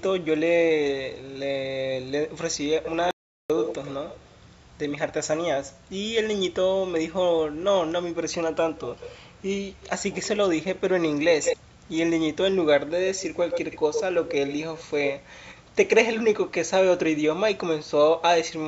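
Speech with an echo leak in five stretches: 2.83–4.37 s (delay 97 ms, only a few dB below the voice), 8.8–9.16 s, 9.81–10.3 s and 11.43–11.57 s (all 171 ms; faint, then as loud as the voice), and 13.13–15.08 s (115 ms, strong). The likely cause is an echo canceller on a loudspeaker side letting its own playback back into the call. A spectrogram shows each syllable's pattern repeated, shifted right by that delay. An audio dropout to silence at 3.11–3.50 s cuts about 390 ms to silence, likely a lost input. It shows as a flat line on the waveform and a blank column across the spectrum, which otherwise stops at 8 kHz.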